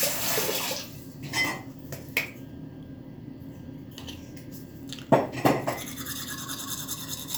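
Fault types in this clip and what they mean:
No faults detected.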